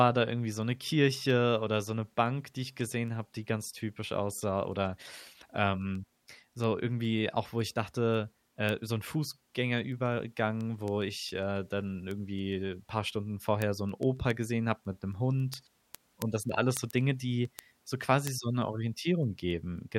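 Speech with word clock ticks running from 0.21 s to 19.92 s: sharp clicks of uneven strength roughly every 0.15 s, around 150 in all. Two unlocked clocks drifting apart, something near 150 ppm, make a single sample drop or double at each slip, and that's each tick.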